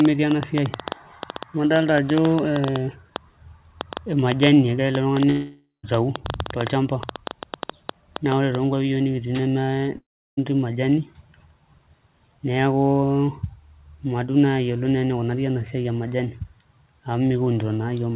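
Speech carries an uneven ticking and popping from the very start until 8.56 s, roughly seven clicks a second at an irregular pace, about 70 in all, each of much the same shape and standing well above the speech, so they are just as audible in the pauses. This train of clicks is likely interference from nearby equipment or a faulty connection or power supply injecting pulses. Two long network dropouts also break the speech. From 5.30 to 5.85 s about 540 ms of audio is missing, and from 9.97 to 10.39 s about 400 ms. In each gap the last sound is stretched into a fading buzz before dropping to silence, and the speech resumes later with that stretch simply gone. That behaviour points to lost packets, with the receiver likely concealing the gap by repeating and fading the last audio. Nothing is heard above 4 kHz, which fits the narrowband call path through a telephone-grade codec such as G.711 mu-law.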